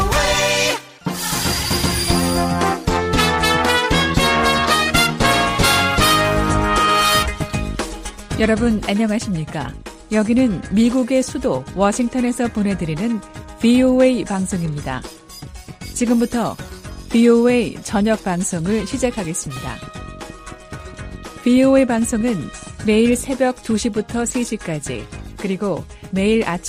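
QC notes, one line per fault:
18.59–22.85 s, train of clicks: about twenty near-identical clicks arrive at a steady 4.7 per second, each reaching roughly the level of the surrounding sound, so they tick over it and through pauses. The regular pulse likely comes from nearby equipment interference or a faulty connection or power supply.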